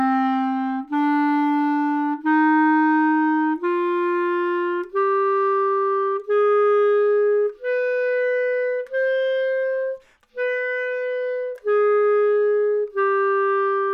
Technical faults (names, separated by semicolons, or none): none